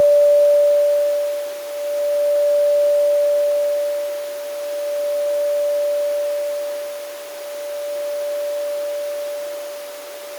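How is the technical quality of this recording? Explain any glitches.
Nothing here jumps out as a glitch; the recording runs along without any dropouts, clicks or other technical hiccups to point to.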